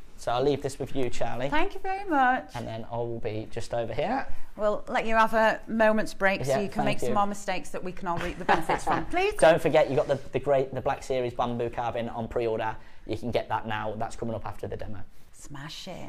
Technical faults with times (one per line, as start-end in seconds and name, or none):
9.43-9.77 hard clipping